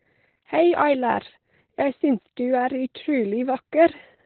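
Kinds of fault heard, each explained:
Opus voice compression: Running at a very low rate, around 8 kbps, the encoder has switched to its SILK linear-prediction coder alone and reduced the signal to narrowband, so nothing above about 4.4 kHz survives. The excitation is coded with very few bits in 20 ms frames, and the damage is heavy. The speech comes out muffled and telephone-like, with a hoarse, slightly robotic buzz running through it from start to finish.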